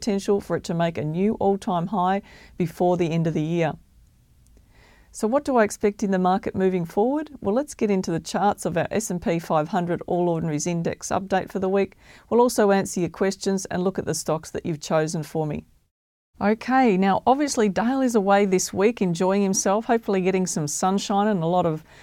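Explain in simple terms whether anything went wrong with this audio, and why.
Nothing went wrong with this recording of speech; there are no audible faults to explain.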